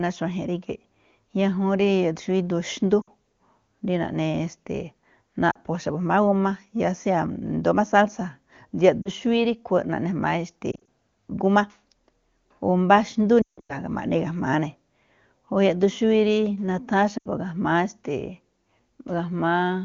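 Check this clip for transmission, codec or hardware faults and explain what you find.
Lost AMR speech frames cause brief dropouts in this AMR wideband speech. They occur at 3.02–3.09, 5.52–5.58, 9.02–9.09, 10.72–10.87, 13.41–13.77 and 17.17–17.28 s. Corrupted frames were concealed by repeating the last good pitch and vocal tract settings at falling gain. Short gaps warble or dip. The worst, at 13.4 s with a 160 ms run, drops to near silence before the speech returns rough.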